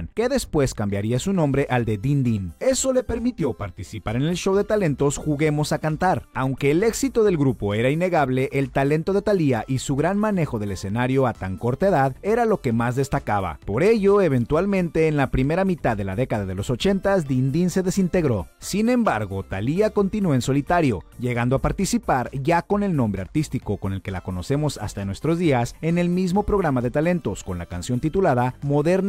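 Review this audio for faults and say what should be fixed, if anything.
From 2.38 to 4.03 s the sound turns hollow and phasey. This is channel delay causing comb filtering. One channel runs roughly 10 ms late, and summing to mono cancels shared content at evenly spaced frequencies, the first notch near 40 Hz. Align both channels sample-accurately before any mono fold-down.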